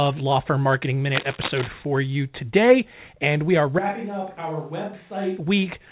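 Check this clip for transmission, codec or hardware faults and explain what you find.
Two faults stand out. The audio also arrives through a telephone-band call path with nothing above 4 kHz, which fits G.711 mu-law coding.

Cable scratch noise runs from 1.10 to 1.70 s. Dense, uneven crackle sits over the speech, only a little quieter than the speech itself. It sounds like scratching and rustling. The likely cause is a worn cable, connector or control being moved. Each small shift changes the contact resistance quickly, and those rapid jumps turn into bursts of noise.

A switch to a distant microphone occurs from 3.79 to 5.38 s. The speech suddenly turns roomy and hollow, and the bass thins. The level drops by around 10 dB. Room noise rises to roughly 30 dB below the speech. The return to the close sound is just as abrupt. The likely explanation is that the close microphone's feed dropped out, and a microphone further from the talker took over.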